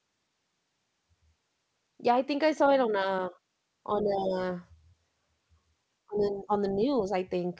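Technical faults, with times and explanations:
4.03–4.36 s, 6.06–6.51 s and 6.75–7.12 s, speech suppressed in double talk: The speech dips three times. The first drop is about 10 dB. The second is the deepest, about 25 dB. The third is a light dip of about 5 dB. The likely cause is an echo canceller turning down the near talker while the far side also speaks. It cannot tell the talker from the loudspeaker echo. Nothing sounds above 8 kHz, which fits a G.722 call path.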